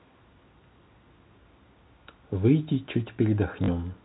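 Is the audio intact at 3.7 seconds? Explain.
No. Just before 3.7 seconds the stream suffered packet loss with the last packet repeated. About 40 ms of audio went missing between 3.64 and 3.68 s, which fits two 20 ms packets, and the receiver filled the gap by replaying the last good packet until fresh data arrived. The copies repeat every 20 ms, so the short run buzzes at roughly 50 Hz, heard as a brief robotic stutter over the narrow 4 kHz telephone band of the G.711 line.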